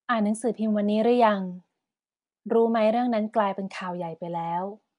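Speech with Nellymoser compression throughout, likely: a rough, hissy haze and smeared, underwater tone, with nothing above 10.6 kHz, which fits Flash's Asao codec near 44 kbps.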